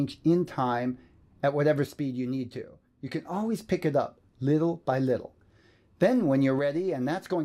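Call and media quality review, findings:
One channel drops out, 1.87–3.25 s and 6.59 s to end: level falls abruptly by about 6 dB and recovers at 3.25 s. Likely a stereo channel lost upstream, so after the mono sum only the surviving side's share of the common content remains.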